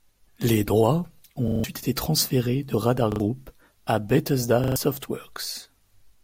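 New audio failed to arrive in time, so the device replayed its last buffer: a repeated buffer at 1.48–1.64 s, between "droits ont" and "été transférés de", then at 3.12–3.2 s and 4.64–4.76 s. Each is a hard-joined stutter whose repeat length fits a 40 ms buffer, skipping roughly 150, 70 and 100 ms of speech respectively.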